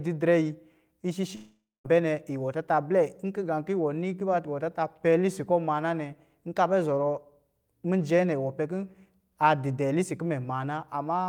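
Long network dropout, 1.35 to 1.86 s: the last sound smears into a fading buzz, then 220 ms of silence, and speech resumes with 500 ms gone. Packets likely never arrived, and the receiver concealed the gap by stretching what it had.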